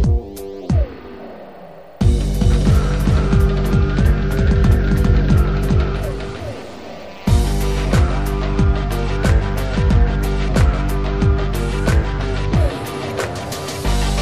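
From 2.18 s to 7.38 s a doubled audio track appears: a second, equally loud copy trails by roughly 400 ms, likely from a slower capture path. It sounds like a dry echo switching on and off abruptly, and spectrograms show every pattern repeated, offset horizontally.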